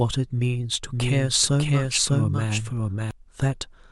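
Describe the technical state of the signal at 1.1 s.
At 1.1 s the signal carries a doubled audio track, present from 0.91 to 3.11 s: a second, full-band copy of the speech trails roughly 0.7 s behind at about the same level, dry and abruptly cut in, likely from a slower second capture path.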